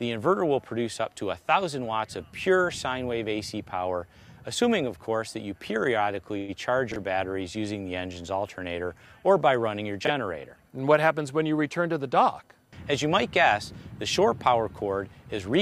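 At 6.37 s the clip hits a call audio freeze, likely caused by packets stalling in transit and the jitter buffer draining. With nothing new to play, the receiver stretches the last sound into a short fading buzz or hiss for about 111 ms, until 6.51 s. When the packets arrive, playback resumes where it stopped, so nothing is lost. The 111 ms is inserted into the timeline, and everything after it plays that much later.

At 6.92 s to 6.96 s, and again at 10.05 s to 10.10 s, there are chunks out of order. In each case a 21.33 ms chunk was delivered one chunk late and plays after the block that should follow it. No audio is missing, but the sequence is swapped, leaving three abrupt joins. Each one is heard as a brief jumbled stutter.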